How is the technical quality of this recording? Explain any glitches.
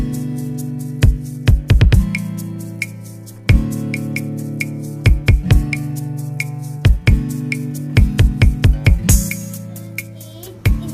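The recording has one clear glitch, crude rate conversion, from 9.41 s to the end. Samples are repeated or dropped to the nearest one rather than filtered, which fits a conversion from 44.1 kHz to 48 kHz. The repeating timing error adds inharmonic tones about 25 dB below the signal, heard as a gritty fizz that rises and falls with loud, bright sound. Unlike steady hiss or quantisation noise, it vanishes in quiet passages and bears no harmonic relation to the sound.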